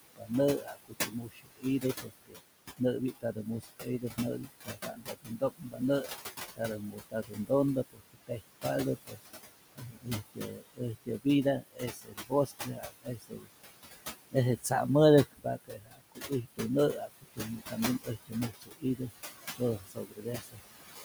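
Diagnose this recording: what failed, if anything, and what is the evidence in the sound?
Call processing stage: noise suppressor artifacts run through the whole recording. The room noise, about 10 dB under the speech, is pulled down by about 17 dB in the gaps and swells back beneath each phrase. A spectrogram shows the noise floor pumping with speech activity, sunk between words and rising under them.

Also in call processing, there is speech cut by the noise suppressor. The gain rule mistakes weak speech energy for noise and attenuates it with the background, so soft consonants and word endings sound swallowed. This happens from 0.16 to 13.5 s (roughly 5 s affected, dips up to about 22 dB), 14.32 to 14.72 s (about 0.15 s, about 15 dB), and 15.25 to 21.05 s (about 2 s, about 21 dB). On the waveform, syllable tails collapse abruptly, and the spectrogram shows gaps carved into speech harmonics.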